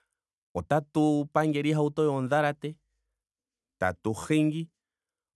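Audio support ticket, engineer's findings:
No faults found on review of this speech recording; nothing to report for this ticket.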